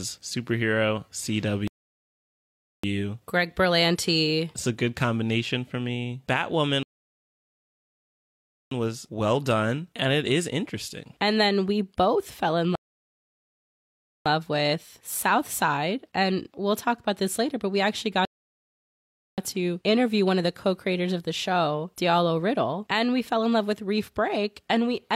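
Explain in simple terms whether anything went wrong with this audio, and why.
Four rebuffering stalls, at 1.68–2.84 s, 6.83–8.71 s, 12.75–14.26 s and 18.25–19.38 s: the player ran out of downloaded speech, went silent for 1.1 to 1.9 s, then resumed exactly where it stopped.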